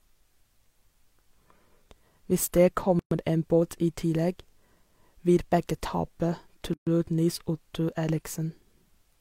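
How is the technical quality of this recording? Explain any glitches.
The speech is broken twice by a gap at a join of encoded pieces, at 2.99 to 3.11 s (about 120 ms, just before "en båt i") and at 6.74 to 6.87 s (about 130 ms). The audio was encoded in separate pieces and joined untrimmed, so each join keeps the encoder's leading delay and last-frame padding. Continuous speech drops to silence with smeared edges, then carries on exactly where it stopped.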